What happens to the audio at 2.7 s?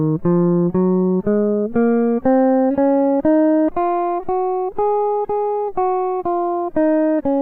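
Nothing goes wrong at 2.7 s; the music plays through that moment intact, with no dropout, click, glitch or other audible fault.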